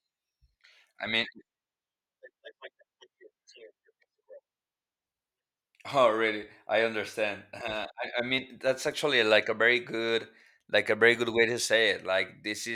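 No technical faults turn up anywhere in the recording.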